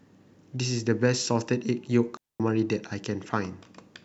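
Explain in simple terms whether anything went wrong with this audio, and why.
Yes, one thing went wrong. At 2.17 s the speech suddenly drops into near silence for about 0.23 s, until 2.40 s. That's a digital wireless dropout: the wireless link lost too much data, so the receiver simply muted, leaving a clean gap without any crackle or hiss.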